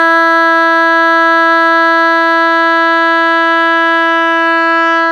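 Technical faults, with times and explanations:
Nothing technical goes wrong anywhere in this bit of music, so there's nothing to flag.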